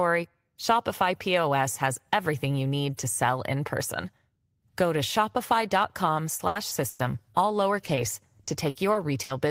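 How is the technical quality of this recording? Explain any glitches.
The speech recording has transmission faults in its final three seconds, where network packet loss breaks up the audio.

Repeated packet loss (robotic sound), 6.37–7.01 s: four gaps totalling 220 ms, the longest 100 ms, about a third of the stretch. Each gap is bridged by extending the previous sound, giving choppy output.

Short concealed packet loss at 7.85 s and 7.95 s: about 20 ms dropped each time, filled by continuing the preceding sound and blending back. Each is heard as a brief smear or wobble.

Repeated packet loss (robotic sound), 8.43–9.31 s: four more gaps totalling 180 ms, the longest 60 ms, a fifth of the span. This is milder but still audibly choppy.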